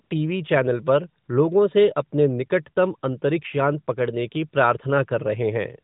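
Twice the phone's voice activity detection judged the talker silent and stopped sending speech frames, so the receiver filled each gap with AMR comfort noise built from a rough estimate of background level and spectrum. From 0.04 to 0.10 s, just before "टीवी चैनल पर लोगों", and from 1.24 to 1.28 s, between "टीवी चैनल पर" and "लोगों से", the real narrowband background gives way to a smooth, steady hiss that switches in and out.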